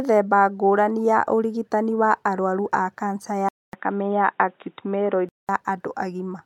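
Right after "wa arũaru ma kanca", at 3.49 s, the speech drops out for 0.2 s and comes back dull and boxy with nothing above 3.8 kHz, at much the same level over a faint new hiss. That points to the input likely switching to a poorer device, and full clarity returns at 5.49 s.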